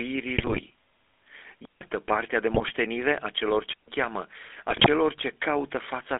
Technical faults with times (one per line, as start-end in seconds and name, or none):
0.00-6.19 GSM full-rate codec
0.38-0.61 GSM bit errors
2.54-2.73 GSM bit errors
4.70-4.88 GSM bit errors